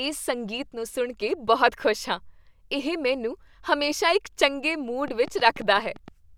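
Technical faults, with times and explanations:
5.08 to 6.09 s, train of clicks: about seven sharp ticks at roughly 7 per second, unevenly spaced and similar in shape, peaking near the level of the speech itself, most likely from electrical interference or a faulty connection or power supply injecting repeated pulses.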